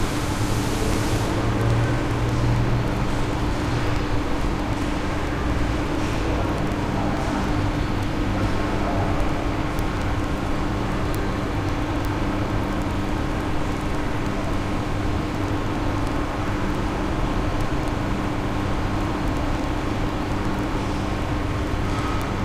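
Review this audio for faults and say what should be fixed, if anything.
The receiving device is running on its own clock instead of locking to the incoming digital stream, which fits a mismatch of roughly 500 parts per million. Every time the two clocks slip past each other, one sample is dropped or repeated, so word clock ticks run continuously from 0.12 s to 22.44 s. They land about twenty times a second, hundreds in all, as sharp clicks of varying strength.

To prevent this, slave the receiver to the sender's clock or a shared word clock before recording.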